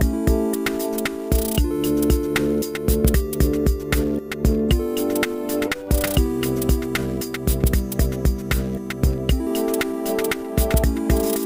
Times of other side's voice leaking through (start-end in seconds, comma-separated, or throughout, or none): none